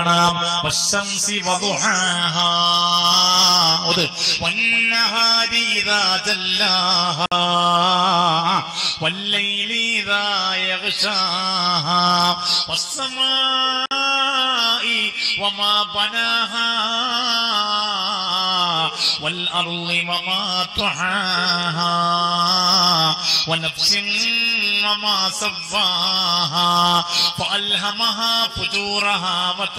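The audio has two short dropouts where continuous sound stops and then resumes exactly where it left off: about 57 ms from 7.26 to 7.32 s, and about 53 ms from 13.86 to 13.91 s. Each is a gap at a join of encoded pieces. The sections were encoded separately and butted together untrimmed, so each encoder's start-up delay and final-frame padding remain as silence. The codec smears the otherwise abrupt edges.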